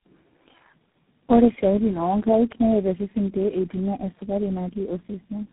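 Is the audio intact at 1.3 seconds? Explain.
No. Tandem speech coding runs through the whole clip, including 1.3 s. The speech sounds like it has been decoded and re-encoded across about four low-rate codecs in a row, each adding damage to the last. The result is rough, muffled and warbly, with nothing above 3.9 kHz.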